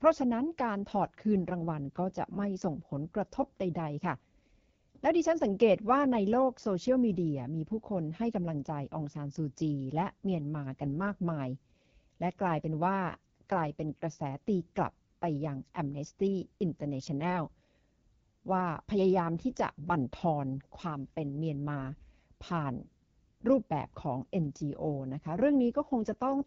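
Throughout the clip, the speech has passed through the AMR wideband (HD Voice) codec at one of its lowest rates, which fits an 8.85 kbit/s mode. Its pulse-driven vocal tract model is starved of bits, so the speech sounds plainly rough and raspy, with a noisy upper band.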